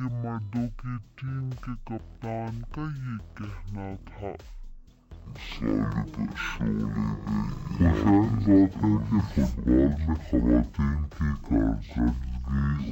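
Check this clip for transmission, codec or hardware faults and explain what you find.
There is one fault, and it runs through the whole clip.

From start to finish the sound plays at half speed and a full octave low, 12 semitones down, with a faint mirrored copy sitting in the upper half of the spectrum. This is stereo read as mono: the player takes the alternating left and right samples as one continuous channel, so each moment of audio spans twice as many samples, stretching time, halving pitch, and folding a ghost image upward.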